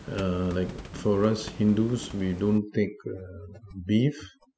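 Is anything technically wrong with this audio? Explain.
Yes. From 2.58 s to the end, overdone noise removal suppresses frequency bands near the room noise floor (about 18 dB below the speech), so the background turns to twinkling specks. A spectrogram shows scattered isolated dots and patchy, hollowed-out harmonics.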